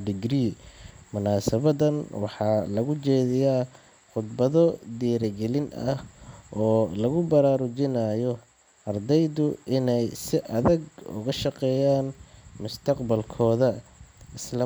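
No faults detected anywhere in the recording; the speech runs without any technical defect.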